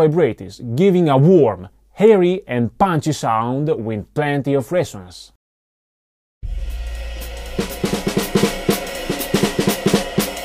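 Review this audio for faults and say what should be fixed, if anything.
Nothing stood out on listening, so there is nothing here that needs fixing.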